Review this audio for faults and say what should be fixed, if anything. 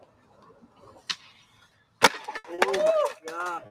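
The noise suppressor applied to music or sounds is active throughout the clip. It is a speech-oriented processor that treats sustained tones, ambience and decays as noise, and it swings the gain by something like 15 dB as it decides what to keep. The result is audible pumping and thinning. On a spectrogram, sustained partials and tails fade or flicker while onsets stay bright. The waveform envelope breathes instead of following the source. Prevention: bypass speech noise suppression whenever the input is not speech.

The sound cut by the noise suppressor is heaviest from 0.0 to 1.03 s, about a second of affected audio, and again from 1.44 to 2.0 s, about half a second. In both spans the level sinks by about 9 dB at its deepest. Held material and decays are pulled down while transients mostly survive. A waveform shows the body of each sound collapsing after its attack. A spectrogram shows energy dimming in bands mid-sustain and tails truncated early. 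Prevention: disable the suppressor or switch it to a music mode so steady content is not classified as noise.

Three instances of short stall from a late packet occur, at 2.37 to 2.46 s, 2.54 to 2.60 s and 3.66 to 3.70 s. The jitter buffer ran dry each time, and the receiver stretched the last sound by 70 ms, 40 ms and 40 ms before resuming where it left off. Nothing is lost, but the sound hangs with a faint buzzy or dipped quality. A spectrogram shows a smeared, repeated-looking frame stretched horizontally, and the waveform shows a brief looped or flattened stretch. Prevention: enlarge or adapt the jitter buffer so late packets arrive before it empties.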